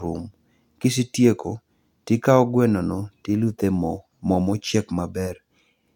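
Nothing in this short bit of speech stands out as a technical problem at any point.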